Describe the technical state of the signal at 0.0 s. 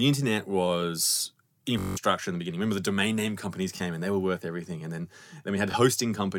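The signal at 0.0 s is intact, with no audible technical fault at that moment.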